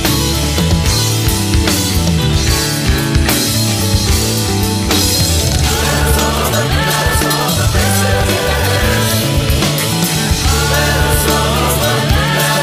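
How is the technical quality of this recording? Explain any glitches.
One glitch stands out. From 5.47 to 8.83 s the audio abruptly rushes ahead, sounding hurried while its pitch stays put. This is a time-stretched section running at 1.56 times normal speed, likely where software squeezed the passage by dropping short slices to preserve pitch.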